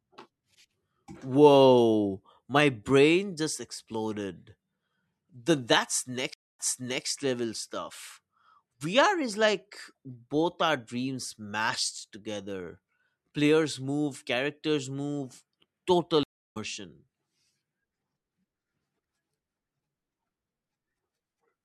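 At 6.34 s the speech drops into a stream reconnect. The connection breaks, about 255 ms of silence follows, and a fresh decoder picks up 469 ms earlier in the stream, so a short stretch repeats before "level stuff" by 7.06 s. A second reconnect at 16.23 s gives 325 ms of silence, then resumes roughly a third of a second later, skipping material by 16.57 s. Both restarts come back muted or fading in briefly.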